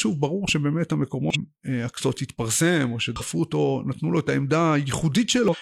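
Damaged data in a compressed stream at 1.30–1.36 s, 3.16–3.22 s and 5.48–5.55 s: corrupted bytes throw the decoder out of sync, leaving brief glitches in the speech.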